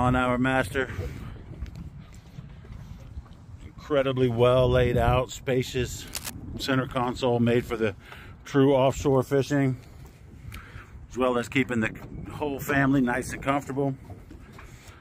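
From 6.07 to 6.30 s a dense, uneven scratching and rustling sits over the sound, roughly 10 dB below it. This is cable scratch noise, likely from a worn cable, connector or control being moved so its contact resistance fluctuated rapidly.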